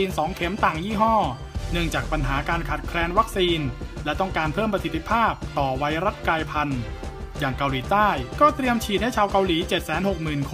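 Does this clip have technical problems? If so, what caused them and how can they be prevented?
No, nothing stood out as a technical problem on listening to this clip.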